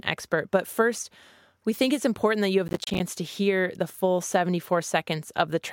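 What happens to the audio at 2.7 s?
At 2.68 s the speech breaks into processor overload crackle that lasts until 3.0 s. The processor keeps missing its deadlines for roughly 10 ms buffers, and each miss drops a hard-edged gap of silence. The result is a gritty tearing across the voice, where a single dropout would give just one click.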